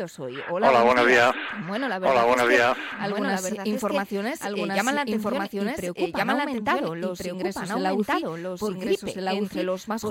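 The audio was likely captured twice, once through a slower path, leaving a doubled audio track: a second, equally loud full-band copy trails about a second and a half behind throughout.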